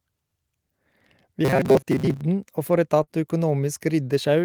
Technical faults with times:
1.45-2.21 robotic sound from repeated short buffers
3.03-3.10 short concealed packet loss

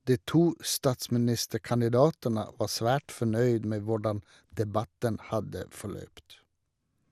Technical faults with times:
0.00-7.12 MP2 compression

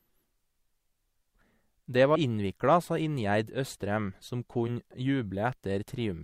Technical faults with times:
2.15 compressed frames skipped
4.67-4.70 compressed frames skipped

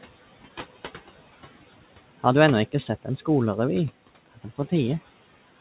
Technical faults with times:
0.00-5.61 noise suppressor artifacts
4.26-4.72 speech cut by the noise suppressor

